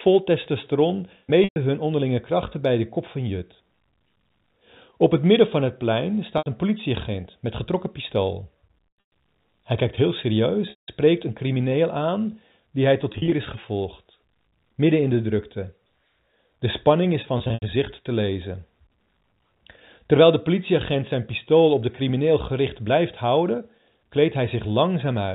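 Packet loss with pitch repetition breaks the speech six times, at 1.44–1.56 s (just before "hun onderlinge krachten bij"), 6.38–6.46 s (after "midden van het plein"), 8.88–9.12 s, 10.70–10.88 s, 13.12–13.32 s (before "is gevolgd midden in") and 17.38–17.62 s. Lost stretches run 80 to 220 ms, some scattered over up to 240 ms, in steps that fit 20 ms packets. The receiver loops the last pitch period, so each gap sounds like a brief buzzy, held tone that fades. On a spectrogram it shows as frozen, evenly spaced harmonic stripes that dim out. On the waveform it shows as identical repeating cycles with a decaying envelope. The band stops at 4 kHz, as expected of the G.711 A-law telephone coding.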